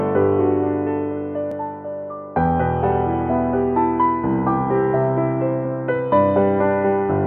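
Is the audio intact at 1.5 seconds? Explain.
No. A dropped buffer (overrun) occurs at 1.52 s. The music jumps forward by a tiny amount, roughly 5 ms, with no gap of silence. The likely cause is that the recording software failed to collect a block of samples before the hardware overwrote it, so that stretch was lost and the audio on either side was butted together, producing the discontinuity heard as the jump.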